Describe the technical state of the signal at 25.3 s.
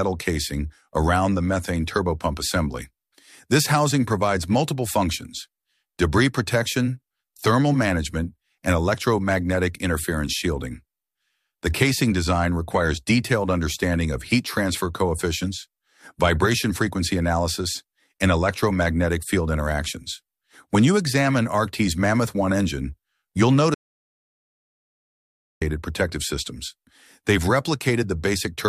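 At 25.3 s the signal is in an audio dropout to silence that runs from 23.74 s to 25.62 s, about 1.87 s of missing audio. The sound cuts off abruptly and the gap is silent with no background or room tone, then the audio returns mid-flow. The likely cause is a lost input, such as a disconnected device or failed link, while the recorder kept writing silence. Whatever occurred during that span is gone.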